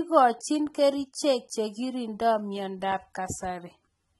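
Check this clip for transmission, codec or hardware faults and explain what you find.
The speech has been through lossy AAC compression at a low bitrate for the whole clip. The coder likely starved its frequency lines of bits, discarding the top band and coarsely quantising the rest, which fits roughly 24 kbps AAC-LC. Nothing survives above about 11.8 kHz, so the speech sounds dull, and the damage is plainly audible as smeared detail with a warbling, fizzy texture on sibilants and held sounds.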